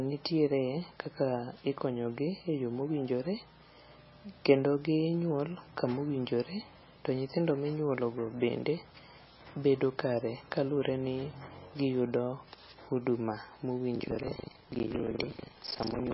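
Speech throughout, with heavy lossy-coding damage across the whole clip. The treble stops dead at about 5.6 kHz, and the remaining band has a watery, swirling quality as weak spectral components flicker in and out from frame to frame, with sibilants turning chirpy and consonant onsets smeared. The likely cause is MP3 compression at a very low bitrate, which the depth of damage suggests is in the region of 18 kbps, forcing the encoder to discard the upper band and thin out what remains. From 13.92 s to the end of the clip there is buffer tearing: a robotic 25 Hz buzz rides on the speech, present only while there is signal. Each 40 ms period, which fits the buffer cycle, contains a hard-edged slice of roughly a third of its length carrying audio from around 150 ms earlier, where the write and read positions of the ring buffer have drifted into each other.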